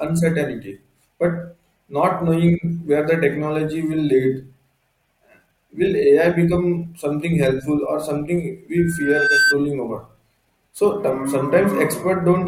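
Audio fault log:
8.77–9.58 s, loudspeaker feedback squeal: a single tone at 1.6 kHz rises out of the speech and swells over roughly three-quarters of a second. By its peak it sits about 5 dB above the programme level, and then it cuts off. The microphone is hearing the loudspeaker it drives, and at 1.6 kHz the round-trip gain goes past unity. Each pass through the loop reinforces that frequency until it dominates as a steady squeal.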